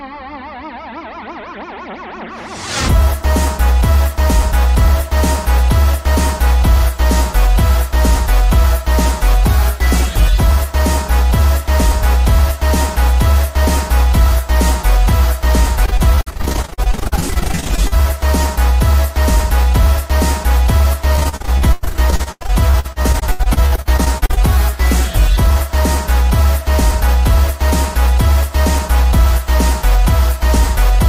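Audio breaks up twice with repeated packet loss (robotic sound), 15.85–17.94 s and 21.16–24.39 s: dozens of short dropouts, up to 99 ms, patched by stretching the last sound.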